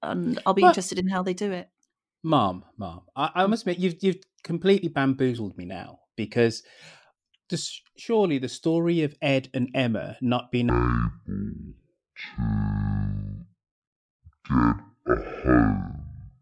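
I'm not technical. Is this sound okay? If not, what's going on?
No. From about 10.70 s, just after "not being", to the end at 16.41 s, the clip has a wrong sample rate fault. The system plays the recording back at roughly half the rate it was captured at, which fits 44.1 kHz audio being played at about 22 kHz. With nothing correcting for that, everything runs at half speed and drops a full octave, so the speech becomes slow, deep and dragging, including "yeah in the countryside".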